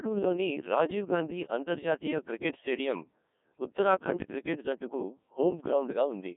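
From start to finish the speech sounds robotic and buzzy, heavily damaged, confined to roughly 200 Hz to 3.6 kHz with nothing above 3.8 kHz. This is the Codec 2 vocoder, at a rate that fits 1.6 kbit/s: only pitch, voicing, energy and spectral shape survive, resynthesised from sine waves.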